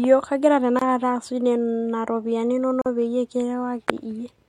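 At 0.79 to 0.82 s and 2.82 to 2.86 s, a gap at a join of encoded pieces cuts silences of about 23 and 43 ms into the speech, two seconds apart. Encoder start delay and end padding remain at these joins, and the speech resumes exactly where it stopped, so it sounds like a pause with nothing lost, unlike a dropout.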